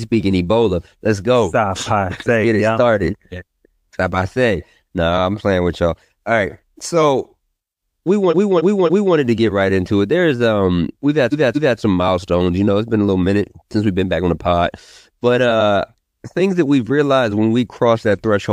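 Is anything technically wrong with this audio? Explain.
Yes. There are two bursts of repeated frames. From 8.29 to 9.13 s a block of about 279 ms plays three extra times, adding 0.84 s. From 11.31 to 11.77 s a block of about 232 ms plays twice more, adding 0.46 s. Those block lengths fit runs of roughly six and five compressed frames that were stored or sent again, so the decoder replays identical material. Unlike an echo or reverb tail, the copies don't fade or overlap. The sound restarts at full level and gives a stutter.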